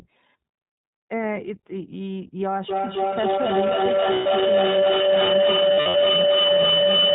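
Speech heard through the iLBC codec, with plainly audible coding damage: nothing survives above 4 kHz, and the voice has a rough, synthetic edge. That edge fits the 15.2 kbps mode, where each 20 ms frame's excitation is coded on its own. On a spectrogram, the energy stops flat at 4 kHz. From 2.69 s to the end, a feedback howl builds as a microphone-to-loudspeaker loop gains level on every pass. It narrows to a tone of around 500 Hz, peaks at about 9 dB above the speech, and pulses roughly every third of a second with the loop delay. It shows as a thickening horizontal band with regular swells in the waveform. Lost iLBC frames appear at 4.14–4.27 s, a 120 ms gap that fits six frames, and as scattered losses across 5.74–5.96 s, with runs of up to about 70 ms. At each, the decoder repeats the last pitch cycle mixed with noise, giving a held, buzzy vowel that shows as flat repeated harmonics before the speech recovers at once.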